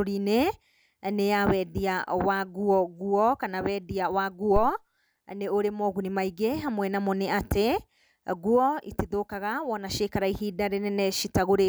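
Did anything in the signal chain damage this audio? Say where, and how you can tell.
Yes: a phantom power thump in the analogue input. Supply switching on the live line hit the coupling capacitors, leaving a deep thump from 4.56 to 4.76 s, just after "nguo kana wenia wa", peaking about -14 dBFS and decaying over 44 ms.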